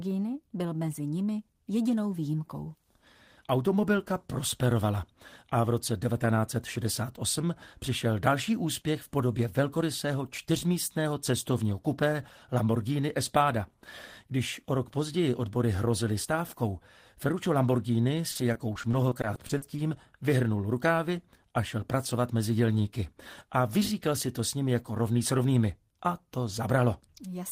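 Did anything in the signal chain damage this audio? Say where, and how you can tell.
Yes, at the network stage: repeated packet loss from 18.31 to 19.80 s left about a dozen brief holes, none over 40 ms, patched by repeating prior sound, giving choppy, robotic speech.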